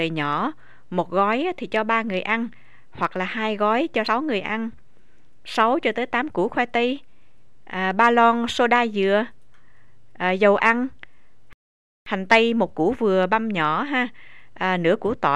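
Damaged data in a compressed stream occurs at 4.07 s, a disturbance lasting only about 12 ms. At that point the encoded bytes arriving at the decoder were wrong, so it could not interpret the frame correctly and had to hunt for the next valid frame header before output resumed. The result is a very brief, sharp glitch that cuts into the audio for a fraction of an instant, after which playback carries on from the recovered frame.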